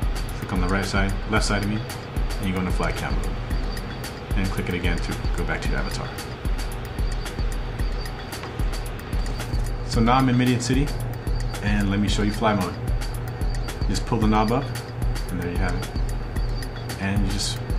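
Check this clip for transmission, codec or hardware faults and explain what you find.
Nothing stood out on listening to the clip.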